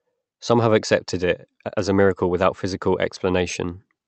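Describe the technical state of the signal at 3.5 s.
At 3.5 s the speech is intact, with no fault present, only the ordinary coding character and limited top end of the call path it travelled through.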